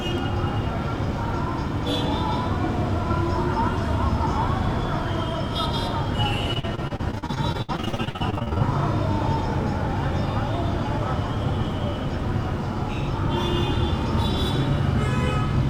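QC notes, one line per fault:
6.53–8.62 s: repeated packet loss (robotic sound). The sound breaks into a rapid run of short dropouts, the longest about 62 ms. Each hole is patched by extending the preceding sound, covering roughly a third of this stretch. The result is choppy sound with pieces missing.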